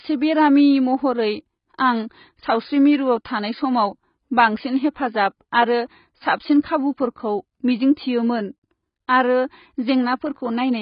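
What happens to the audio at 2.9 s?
At 2.9 s the speech sounds dull and smeared, cut off above about 5.1 kHz with fizzy sibilants, throughout the clip. That's likely heavy AAC compression at a very low bitrate, around 16 kbps.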